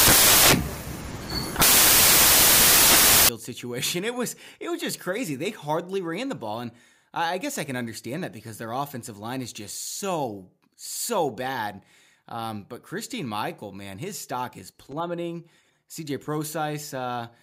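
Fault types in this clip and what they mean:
Samples built from the wrong bytes: the bytes of each sample are combined wrongly, so low bits dominate. The speech becomes loud, harsh broadband noise from 0 to 3.29 s.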